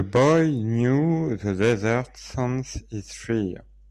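A short speech recording with mains hum coming in at 1.15 s and sitting there right to the end at 3.90 s: a steady 50 Hz drone, roughly 30 dB under the speech, that points to a ground loop or a transformer close to the signal path bleeding the power line in.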